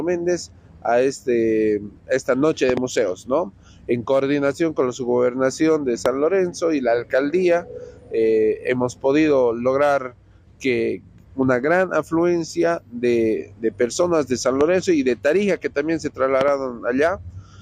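Loud pops jump well above the sound, doubled at 2.70–2.79 s and 16.41–16.50 s, single at 6.06–6.08 s and 14.61–14.63 s, likely from brief voltage glitches.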